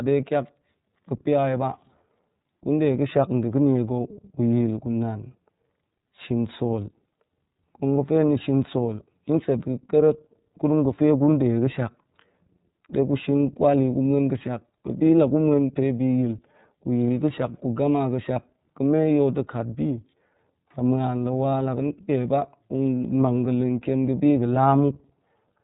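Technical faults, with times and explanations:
Throughout, iLBC codec: The speech is band-limited, with nothing above about 3.8 kHz, so sibilants and breath lose their air and the sound is thin. The coding damage is plainly audible. Each block of sound is coded independently of the one before, and the result is a rough, slightly synthetic texture. The roughness fits 30 ms frames and the iLBC 13.33 kbps mode. The narrow band and the grainy, buzzy character together mark this narrowband VoIP codec.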